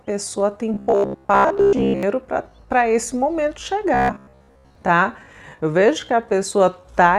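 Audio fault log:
0.74–2.03 s and 3.94–4.75 s: robotic sound from repeated short buffers. New audio likely arrived too slowly, so playback kept looping a roughly 15 ms slice while real audio was skipped. With most of the sound made of repeats, a rigid, metallic 66.8 Hz buzz follows the original only roughly.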